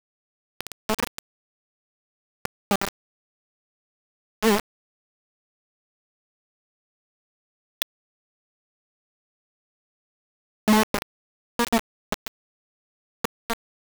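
Gritty, grainy distortion coats the speech from start to finish, and quiet passages sputter or drop out between coarse steps, with the error nearly as loud as the signal itself. That points to low bit depth without dither, likely rounding to about 3 bits.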